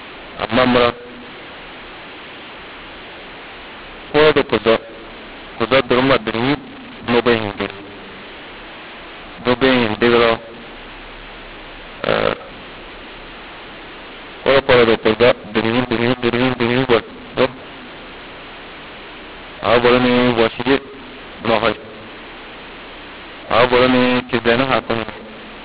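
The G.711 decoder applies the A-law curve to samples that were coded with mu-law, and this law mix-up runs through the whole clip. Each 8-bit code is mapped onto the wrong logarithmic scale, so some levels come out too loud, others too soft, and the quietest samples are lifted well above silence. The speech, already confined below 4 kHz by the telephone coding, sounds harsh and distorted, and its pauses fill with hiss.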